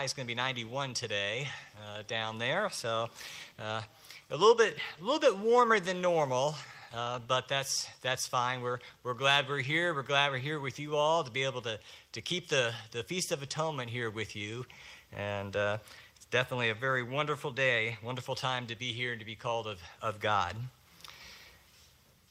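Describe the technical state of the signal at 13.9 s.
At 13.9 s the signal is intact, with no dropout, distortion, glitch or other technical fault audible at that point.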